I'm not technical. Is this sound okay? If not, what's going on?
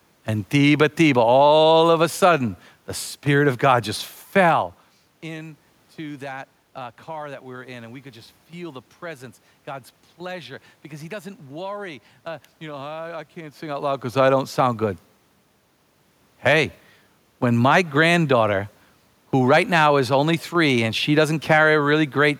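Yes, nothing here points to a fault in the recording or playback system. There is some ordinary background noise from the room, and the voice gets quieter or louder at around 4.5 and 13.5 seconds, which is just the talker moving relative to the microphone.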